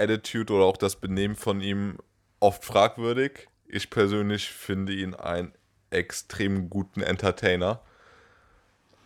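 No technical faults can be heard anywhere in the speech recording, and the signal holds steady throughout.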